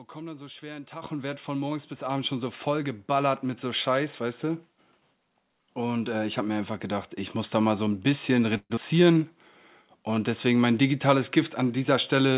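Microphone volume stepped up at 1.02 s and again at 2.04 s in this speech clip: the level of the voice and the background jumps together in a single step, by about 10 dB the first time and about 4 dB the second. The call software judged the input too quiet and raised the device's input volume at once rather than gradually, so each change lands as an abrupt step. A long network dropout is the likely cause of the disruption from 8.57 to 8.80 s. The receiver fills about 198 ms by extending the last sound, which decays into a fading buzz or hiss. A short stretch of about 30 ms of near silence follows, and the speech resumes with about 90 ms missing. Because the gap has to be absorbed, the playout delay shifts by somewhere around 50 ms. A jitter buffer slow-down follows from 8.93 to 9.19 s. To build up a reserve, the receiver repeats single pitch periods, adding 48 ms. Playback runs at 84% speed over that span with the pitch unchanged, so the sounds there are stretched. 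Throughout, the band stops at 4 kHz, which matches narrowband telephone coding such as G.711 A-law on the call path.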